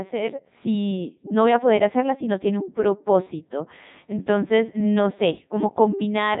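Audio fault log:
throughout: Codec 2 vocoder, the speech rebuilt from sine waves and sounding heavily robotic and buzzy, fitting the 3.2 kbit/s mode; the spectrogram is empty above 3.8 kHz.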